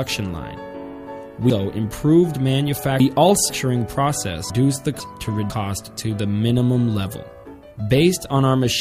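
Between 1.5 and 3.5 s the sound jumbles. These are chunks out of order. Audio here moves in 500 ms blocks, and one block arrives three places late, so it plays after the blocks that should follow it. Nothing goes missing, but the sequence scrambles, with hard joins. From 4.5 to 5.5 s it happens again. This time a block is only one place late, so two 500 ms pieces swap, producing a short stumble.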